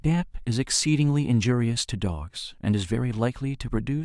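No technical faults can be heard anywhere in this speech recording. There is nothing to place on a timeline or explain.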